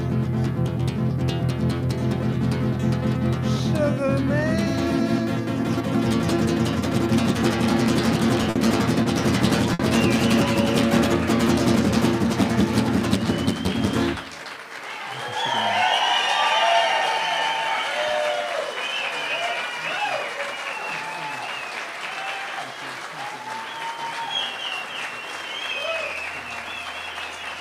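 The audio has two related jitter buffer faults. There are three short stalls from late packets, at 8.50 to 8.57 s, 9.03 to 9.07 s and 9.73 to 9.81 s. In each, the buffer ran dry and the last sound was held for about 50, 20 and 60 ms, then resumed where it stopped. Nothing is lost, but the sound briefly drags. Later comes a jitter buffer speed-up from 14.26 to 14.65 s. Pitch-period pieces totalling about 40 ms were cut out. Playback runs at 109% speed with unchanged pitch, so that stretch sounds rushed.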